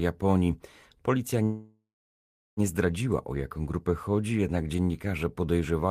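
A call audio freeze runs from 1.43 to 2.60 s. The speech stops and the last sound is stretched into a fading buzz that drops to silence for about 0.72 s of the 1.14 s hold, likely because packets were held up and the receiver's jitter buffer ran empty. When the speech resumes it picks up exactly where it stopped, with nothing lost, so everything after it arrives 1.14 s later than before.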